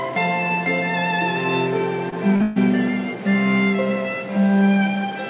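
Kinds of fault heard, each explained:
Short concealed packet loss: Two brief stretches of audio, about 20 ms at 2.10 s and 40 ms from 2.36 to 2.42 s, never reached the decoder in time. The receiver extrapolated the preceding sound and blended back, leaving a short smear or wobble in the band-limited G.711 signal.
Burst of packet loss: Straight after the second short gap, about 140 ms from 2.42 to 2.58 s was lost. Concealment stretched the last sound while fading it down, with no full silence, then playback resumed further on, the intervening audio simply gone.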